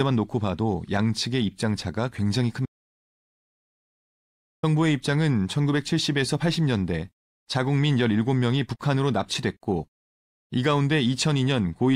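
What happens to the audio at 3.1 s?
At 3.1 s the speech is inside an audio dropout to silence from 2.66 to 4.63 s: 1.97 s of total silence with no room tone, likely a lost input while zeros kept being recorded. The waveform is a flat line, the spectrogram a blank column.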